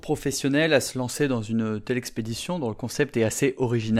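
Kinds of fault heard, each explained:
No audible faults detected.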